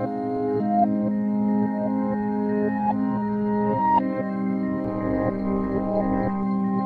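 From 4.84 s to 6.43 s the sound carries overlap-add ripple: windowed frames were rejoined with overlaps that fail to sum to constant gain, so level swings by about 11 dB once per frame, around 200 times a second, heard as a metallic buzz with extra tones around each note.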